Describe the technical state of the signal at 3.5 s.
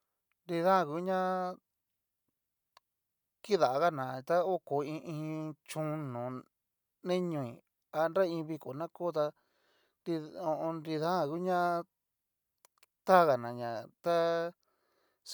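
At 3.5 s the signal is intact, with no audible fault in the speech at that point.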